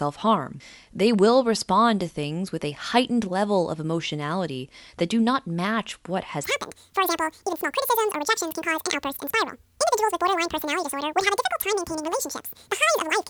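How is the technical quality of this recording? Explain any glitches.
The recording has one clear glitch, affecting its second half.

Wrong sample rate, from 6.44 s to the end at 13.30 s: right after "do not match what", the speech jumps to exactly twice its normal speed and a full octave (12 semitones) higher, sounding squeaky and rushed. The samples are being played back without any rate conversion, at double the rate they were captured at. This fits 24 kHz material played at 48 kHz, so time compresses and pitch rises together by that same factor of two.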